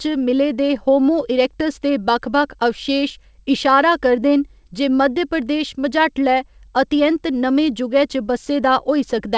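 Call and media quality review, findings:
Nothing to flag on this speech; it's just the normal call path, with nothing above 8 kHz, which fits a wideband codec such as G.722.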